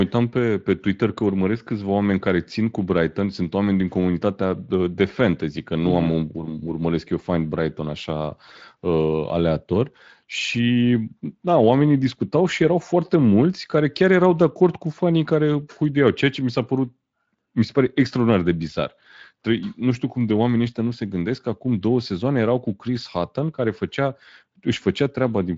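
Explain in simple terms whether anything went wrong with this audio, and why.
Nothing went wrong here.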